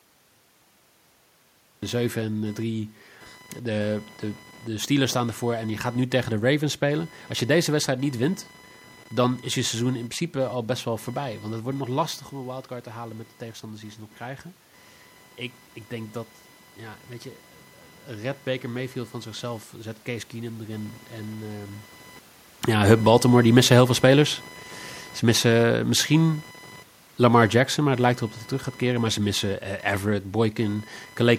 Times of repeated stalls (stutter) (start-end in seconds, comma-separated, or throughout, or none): none